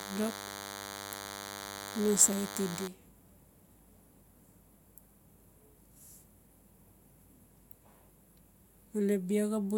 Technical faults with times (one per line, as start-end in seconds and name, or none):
0.00-2.88 DECT cordless phone buzz